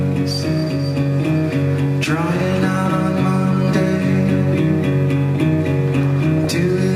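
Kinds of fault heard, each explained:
DAB burbling: Weak reception lets bit errors slip past error correction into the MP2 audio data. Corrupted frames make single sub-bands jump in level. A brief burst sounds at 3.53 s, then another from 6.38 to 6.49 s. This points to an error rate well under one percent.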